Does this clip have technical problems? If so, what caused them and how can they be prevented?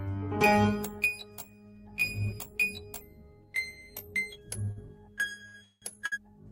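Yes. The music has short stalls from late packets at 4.65 s, 4.71 s, 5.48 s and 6.06 s. Each time a packet missed its slot and the jitter buffer ran dry. The receiver held the last sound until the packet turned up. These holds last 20 ms, 49 ms, 58 ms and 60 ms. Nothing is lost, but each one briefly freezes the music with a slight buzz or dip and pushes playback later. A deeper or adaptive jitter buffer would absorb these delays.

A call audio freeze runs from 5.64 s to 5.84 s. Packets were likely held up in the network long enough to empty the buffer. The receiver stretched the last sound for about 180 ms as a fading buzz or hiss, with about 50 ms of silence inside the gap. Then the music resumed where it had stopped, so nothing is missing but it now runs later. Giving the audio stream network priority would help prevent such long holdups.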